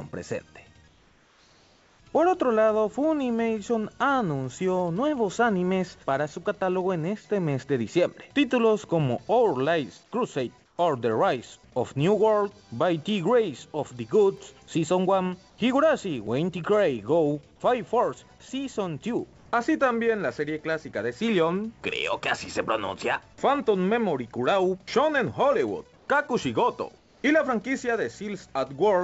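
The quiet gaps in this call audio lose their real background several times, at 0.88 to 2.00 s, 10.66 to 10.78 s, 15.50 to 15.58 s, 19.38 to 19.46 s, 25.96 to 26.08 s and 26.98 to 27.24 s. Each time it turns into a flat, featureless hiss about 2 to 5 dB quieter. That's comfort noise in place of the background, likely from discontinuous transmission, where the far end stops sending during pauses and the receiver fills in synthetic noise. Between 13.76 and 14.53 s there are six sharp CD scratch ticks, each well under a millisecond, at a steady few-per-second rhythm that tracks a damaged spot coming round once per disc rotation, with the player patching over the unreadable samples. The band stops at 8 kHz, which fits a wideband call codec like G.722 on the call path.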